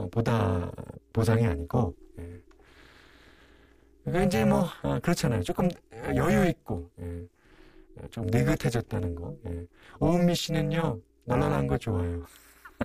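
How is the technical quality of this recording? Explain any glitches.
The recording is seriously degraded by overlap-add ripple running through the whole speech clip. The frames were recombined with overlaps that don't sum to constant gain, so the level swings by about 60 dB once per frame, around 300 times a second. The result is a harsh, metallic buzz with extra tones around every syllable.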